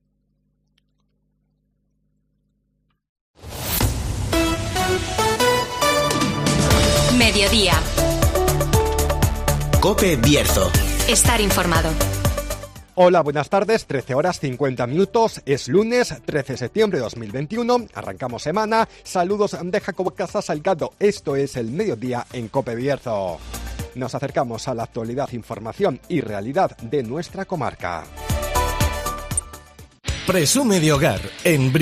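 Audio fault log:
6.18–6.20 s, 20.06–20.08 s, 22.97 s, 25.24–25.26 s and 29.38–29.40 s, damaged data in a compressed stream: five brief blips, each about 20 ms long, where corrupted bytes in the encoded stream made the decoder misread or discard frames and lose sync until it found the next valid frame header. The garbled output sounds like a chirp, squawk, click or short hole. On a spectrogram each appears as a thin vertical disturbance, and the waveform shows a sudden discontinuity at each one.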